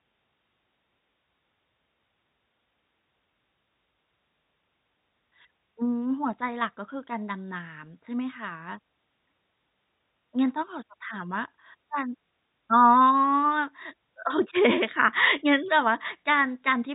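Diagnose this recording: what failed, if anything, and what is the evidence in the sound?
Nothing failed in this speech recording. No stage in the chain leaves any audible evidence of a fault that calls for diagnosis.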